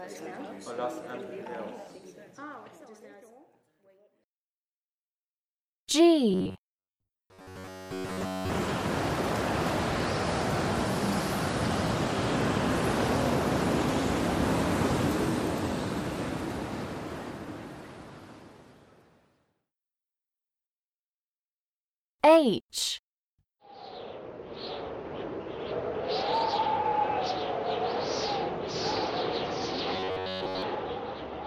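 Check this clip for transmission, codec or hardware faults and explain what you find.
There's one fault, robotic sound from repeated short buffers, from 6.31 to 8.51 s and again from 29.94 to 30.62 s. The sound becomes a rigid metallic buzz at about 93.8 Hz, likely from a starved stream looping roughly 10.7 ms chunks, which replaces most of the real audio.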